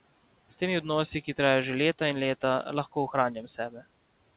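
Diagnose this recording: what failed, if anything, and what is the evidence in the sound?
Speech was cut by the noise suppressor, a call-processing fault. Between 3.46 and 3.84 s, parts of the speech sink into the background. The deepest dip is about 10 dB, and roughly 150 ms of sound is affected in total. Endings and soft consonants there sound swallowed. The suppressor mistook low-level speech for noise and attenuated it with the room noise, which sits about 23 dB below the speech. Nothing is heard above 4 kHz, consistent with a G.711 narrowband call.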